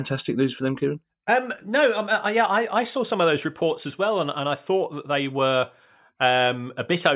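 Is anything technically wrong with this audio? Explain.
No, nothing is technically wrong with this audio.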